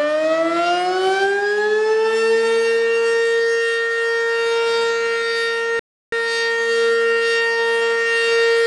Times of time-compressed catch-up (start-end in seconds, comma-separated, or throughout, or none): 6.12-8.58